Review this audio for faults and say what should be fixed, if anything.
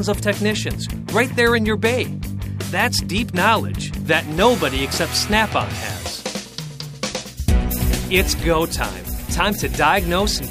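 Nothing in this audio needs fixing, as no faults can be heard.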